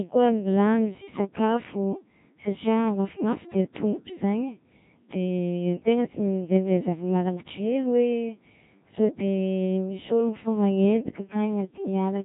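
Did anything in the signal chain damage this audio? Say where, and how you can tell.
Yes, at the codec stage. Throughout, the Codec 2 vocoder makes the speech robotic and buzzy, with nothing above 3.8 kHz. Unlike muffled narrowband telephony, the waveform itself is gone: the decoder rebuilds the sound from sine waves, suggesting roughly 1.3 kbit/s.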